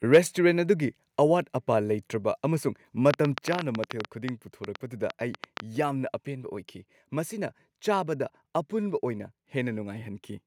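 A short speech recording with a microphone overload from 0.13 to 0.18 s, where peaks push about 4 dB past the converter's limit and roughly a tenth of samples flatten, likely from excessive input gain. At 0.16 s the microphone volume steps down by about 2 dB, an abrupt level drop likely caused by automatic gain control reacting to that clipping. From 3.11 to 5.61 s there is a train of clicks, about 20 similar pulses at roughly 8.4 per second with irregular spacing, standing around 20 dB above the signal and likely from electrical interference or a faulty connection or power supply.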